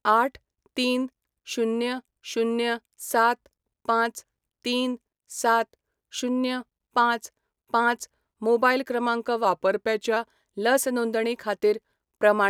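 Speech that, from 9.45 to 10.16 s, suddenly slows by about 5.4% and drops roughly a semitone (about 96 cents) before snapping back to normal. This is a drift correction step, likely from clock-matching software abruptly changing playback rate to rebalance its buffer.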